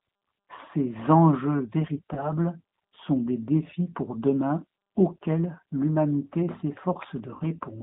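From the start, the speech passes through a G.729 codec, which the sound suggests is running near 8 kbit/s. The band is held to 150 Hz to 3.7 kHz. Each frame is rebuilt from a filter, a pitch predictor and a few pulses. The damage is plainly audible as a rough, synthetic edge.

From 2.14 to 2.31 s, and again from 7.34 to 7.45 s, there is VoIP packet loss concealed by the speech codec. First 30 ms goes missing, then 60 ms, which fits one and then two lost packets. The decoder stretches its last pitch and filter with falling gain. Each gap smears into a fading buzzy tone or coloured noise, and the voice stays weak after the data returns.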